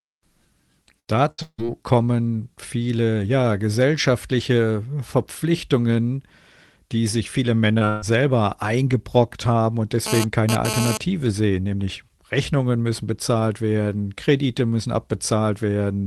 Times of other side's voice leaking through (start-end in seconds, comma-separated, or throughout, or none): none